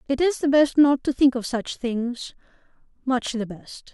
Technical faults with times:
none

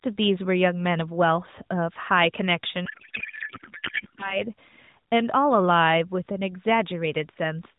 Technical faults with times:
2.86-4.44 codec payload misread

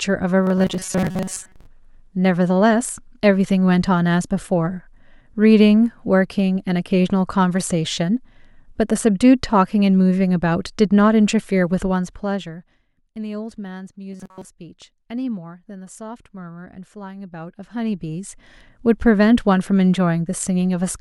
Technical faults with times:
0.43-1.68 robotic sound from repeated short buffers
14.13-14.45 robotic sound from repeated short buffers

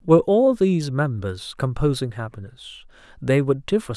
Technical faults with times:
none

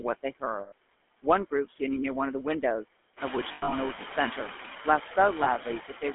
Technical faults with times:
0.00-6.14 noise suppressor artifacts
0.00-6.14 GSM full-rate codec
0.60-0.72 lost GSM frames
3.52-3.73 lost GSM frames
5.44-5.48 lost GSM frames

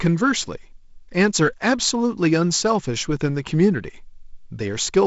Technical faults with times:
none

